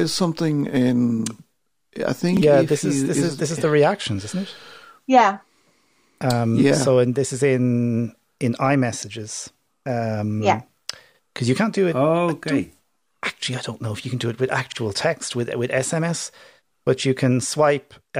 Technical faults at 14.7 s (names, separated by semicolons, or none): repeated buffer